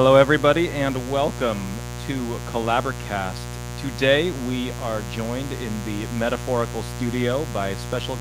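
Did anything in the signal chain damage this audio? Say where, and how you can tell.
Yes, mains buzz from the analogue wiring: a raspy 60 Hz buzz sits under the speech the whole way, fairly loud, with spiky harmonics from switching interference reaching into the kilohertz range.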